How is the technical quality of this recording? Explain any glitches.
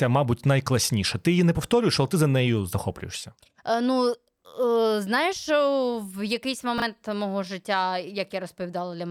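One glitch stands out, from 6.78 to 6.82 s. It is chunks out of order. A 20 ms chunk of the speech arrived one chunk late and plays after the piece that should follow it. Nothing is missing, but the swapped order creates hard joins, heard as a brief jumbled stutter.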